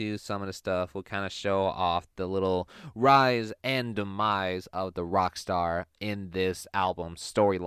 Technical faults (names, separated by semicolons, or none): none